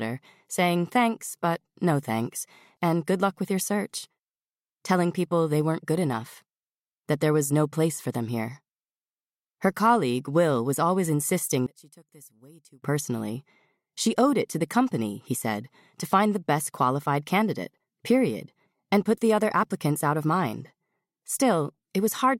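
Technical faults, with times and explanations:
11.66 to 12.82 s, one channel inverted: the sound suddenly drops by about 26 dB to a faint copy, then recovers. The likely cause is one stereo channel flipping polarity, so the shared centre content cancels and only the channel difference remains.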